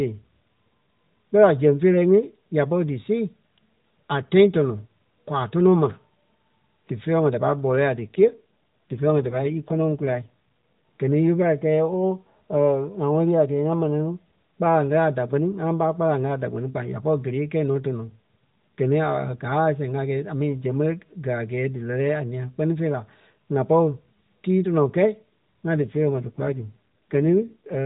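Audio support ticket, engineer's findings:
AMR rate drop, 8.06–10.30 s and 25.82 s to end. Sound turns rougher, more synthetic, same 4 kHz band, no gap. Fits link adaptation from 12.2 to 5.9 kbps.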